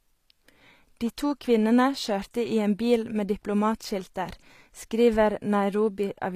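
From start to finish the speech has plainly audible HE-AAC compression damage, likely from a low-rate encode around 24 kbps: the treble is a rebuilt copy of lower bands, so s sounds come out gritty and lispy, and nothing reaches above about 14.9 kHz.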